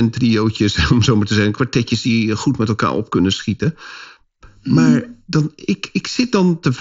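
Speech over what sounds like a wideband Bluetooth headset link, and it's hollow and phasey the whole way through. That's channel delay, so comb filtering: one side arrives under a millisecond late, and summing to mono cuts evenly spaced notches starting around 700 Hz.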